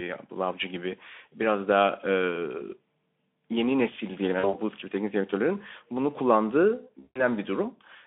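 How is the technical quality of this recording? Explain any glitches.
The recording has two dropouts from VoIP packet loss concealed by the speech codec, heard through a narrow telephone-style band of roughly 300 Hz to 3.5 kHz. At 4.39 s, after "yeni nesil diyelim", about 40 ms of audio is lost. At 7.00 s, after "teknik direktörlerin bunu kullandığı", about 160 ms is lost. The decoder stretches its last pitch and filter into a buzzy, fading tone, and the sound stays weak for a while after packets resume. That lingering recovery sets this apart from a clean gap or click.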